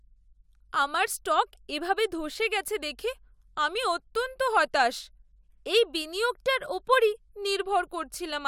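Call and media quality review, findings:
Nothing stood out on this speech clip, with no audible faults anywhere to log against any component.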